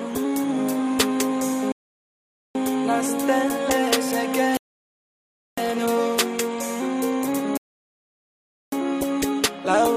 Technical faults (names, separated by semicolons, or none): rebuffering stall